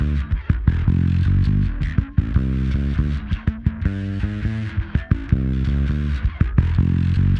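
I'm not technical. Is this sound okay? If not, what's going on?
Yes, nothing stood out as wrong when listening to it.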